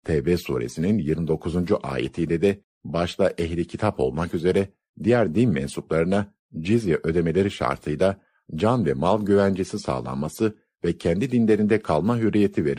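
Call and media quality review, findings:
No audible faults found in this speech recording.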